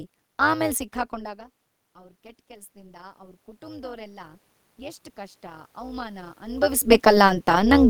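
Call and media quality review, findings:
Overlap-add ripple, throughout. Level flutters at roughly 200 Hz, about 11 dB deep, giving the speech a metallic buzz with extra tones around the voice. Probable component: frame-based processing stage (resynthesis after windowing). Window overlap does not sum to constant gain, so each reassembled frame peaks and dips once.

Automatic gain rising, 1.1 to 6.69 s. Speech and room noise swell together, by about 13 dB over several seconds. Probable component: AGC. Input dropped about 20 dB when the talker moved away near 1.0 s. The AGC gradually raised its gain to compensate, lifting the background with the voice until the talker moved again around 6.5 s.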